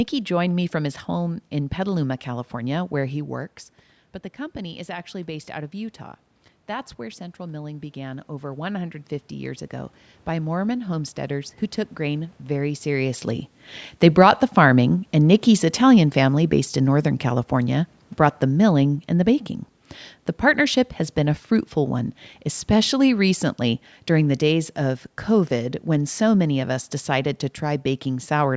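From 14.06 to 20.71 s the automatic gain falls. The control judged the input too loud or its background too noisy and eased it down by about 6 dB, background and speech sinking together, starting just before "has been a fruitful".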